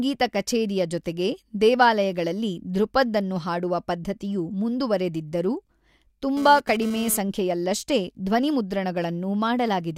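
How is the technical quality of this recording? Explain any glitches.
The recording has one glitch: GSM phone buzz from 6.37 to 7.18 s. A nearby 2G phone, bursting during a data transfer, had its radio pulses rectified by the audio circuitry. This adds a hard, raspy 217 Hz buzz, rich in harmonics, about 14 dB below the speech, appearing briefly and then stopping.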